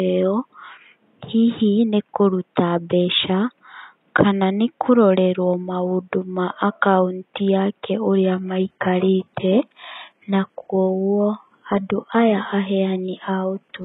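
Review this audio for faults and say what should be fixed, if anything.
At 8.24 s, right after "maũndũ ma akaunti yake", the adaptive stream drops to a lower bitrate and stays there to the end at 13.84 s. The treble suddenly turns thin and synthetic with no gap, which fits a switch from a transparent AAC rendition near 96 kbit/s to a heavily compressed HE-AAC stream around 12 kbit/s. On a spectrogram the upper band becomes a smeared, blocky replica above a hard cutoff. Prevention: give the client more buffer headroom or set a higher minimum rendition so brief connection slowdowns don't force the drop. The faint room noise, about 49 dB below the speech, is part of the recording and needs no fix.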